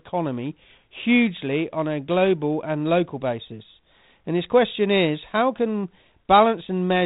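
No technical faults can be heard in the speech.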